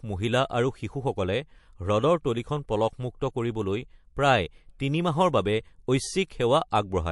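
From start to finish, the speech has a watery, swirling texture. The s sounds carry metallic chirps, and consonant attacks are smeared rather than crisp. This is plainly audible MP3 compression, likely from a low bitrate consistent with about 48 kbps. Starved of bits, the encoder discards weak frequency lines that flicker on and off between frames.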